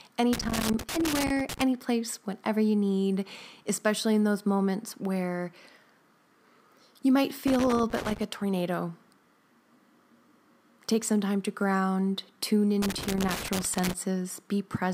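Loose connector crackle hits the speech at 0.33 to 1.62 s, 7.47 to 8.23 s and 12.82 to 13.93 s. A worn contact keeps breaking, chopping the signal into scratchy bursts.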